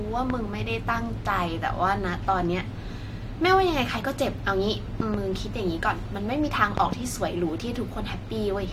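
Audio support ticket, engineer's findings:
Loud pops over speech: single at 0.30–0.33 s, doubles at 5.00–5.17 s and 6.78–6.95 s, peaking about 15–20 dB above signal. Likely plug, switch or driver voltage spike. Speech continues underneath.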